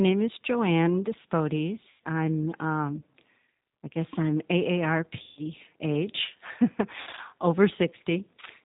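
Throughout, the speech carries plainly audible G.729 codec damage. Rebuilding each frame from a vocal tract filter, a pitch predictor and a few pulses leaves the sound rough and synthetic, with nothing above 4 kHz, which fits an 8 kbit/s G.729A stream. At 1.90 s, just before "I'm um", about 100 ms is missing and covered by VoIP packet loss concealment. The decoder extends its last pitch and filter into a buzzy tone or coloured noise that fades. The same happens at 5.23 s for 140 ms, and at 7.01 s for 120 ms scattered over 160 ms, with the longest gap 60 ms.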